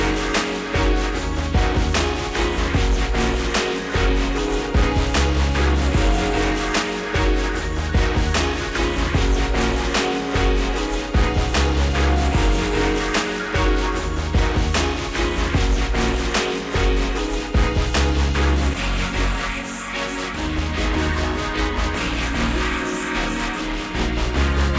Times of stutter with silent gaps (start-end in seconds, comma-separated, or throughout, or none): none